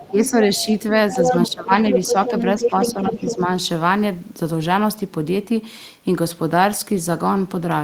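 At 0.0 to 0.1 s a faint second voice sits roughly 20 dB under the talker. This is the other side's voice leaking through, likely far-end sound from the loudspeaker that the echo canceller did not fully subtract from the microphone. From 0.07 to 0.43 s the talker ducks by about 10 dB. This is speech suppressed in double talk, likely the canceller turning everything down when it could not separate its own talker from the echo.

The pattern repeats more strongly from 1.1 to 1.71 s. The talker drops by about 15 dB, while from 1.11 to 1.49 s the leaked voice comes through at roughly the same level as the speech. From 1.91 to 3.36 s the other side again leaks at about equal loudness, and from 2.56 to 3.51 s the talker sinks by a milder 5 dB or so.

The two faults differ in what changes. Leakage adds a separate, often thin or chopped voice on top of the talker. Suppression takes level and high end away from the talker's own voice.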